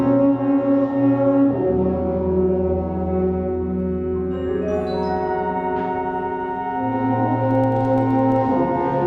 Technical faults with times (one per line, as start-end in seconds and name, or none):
7.51-8.45 filter restarted on every block